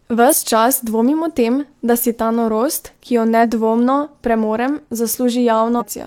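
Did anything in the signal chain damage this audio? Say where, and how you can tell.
Yes: damaged data in a compressed stream at 0.28–0.34, 3.39–3.45 and 5.76–5.83 s, heard as brief disturbances where the codec misreads corrupted frames.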